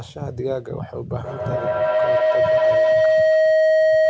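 From 1.24 s to the end, a tone around 700 Hz swells out of the speech, with the loop repeating roughly every tenth of a second, and peaks about 11 dB above it. This is feedback howl: two devices in one room close a microphone-to-loudspeaker loop that gains level each pass.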